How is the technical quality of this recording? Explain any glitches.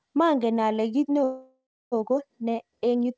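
The recording has two clear glitches, a pace change and a stall, both carried over a call path whose band ends at 8 kHz, which fits G.722 wideband coding.

From 0.92 s to the end, a time-stretched section plays the speech about 1.43 times faster while the pitch stays where it was. This is likely software squeezing the audio to fit a length by dropping short slices. It sounds rushed. On a spectrogram, the harmonics stay at the same heights while syllables become visibly shorter and packed closer together.

From 1.24 s to 1.94 s, a call audio freeze lasts about 0.68 s. Most likely delivery stalled and the jitter buffer emptied, so the receiver kept extending the last sound as a fading buzz or hiss and then fell into about 0.27 s of near-silence. Playback then picks up from where it stopped, so nothing is lost and the timing shifts later by the length of the stall. A spectrogram shows smeared, flat horizontal bands that thin out into a dark gap, and the waveform tapers to almost nothing before the speech resumes.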